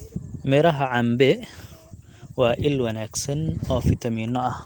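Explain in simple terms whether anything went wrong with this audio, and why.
Nothing went wrong with this speech recording, and no technical fault can be heard anywhere in it.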